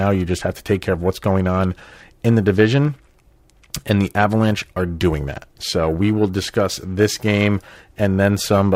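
A rough, metallic edge clings to the speech from start to finish and drops away in the pauses. This is periodic clock jitter: interference wobbling the converter's clock at around 1 kHz, adding sidebands around every frequency, strongest on the brighter sounds.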